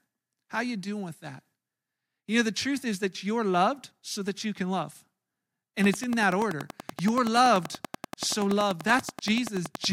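A train of clicks runs from 5.84 s to 9.85 s: around forty near-identical pulses at a regular 10.5 per second, peaking roughly 10 dB above the speech. It is likely interference from nearby equipment, heard as steady ticking that continues through the pauses.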